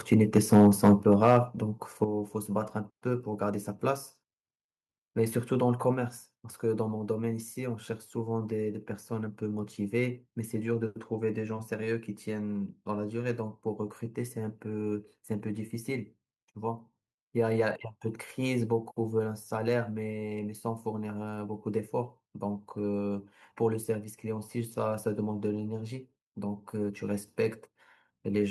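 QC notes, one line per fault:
0.12–1.37 s, microphone overload: the loudest syllables take on a harsh, crackly, flattened edge, with the peaks pushed roughly 5 dB past full scale and a small fraction of samples squared off, likely because the input volume was set high enough to drive the converter into clipping.
1.02 s and 2.04 s, microphone volume stepped down: the voice and background drop abruptly together, by about 6 dB and then about 7 dB, the first dip landing inside the distorted stretch, likely the call software reacting to the overload by cutting the device's input gain in single steps.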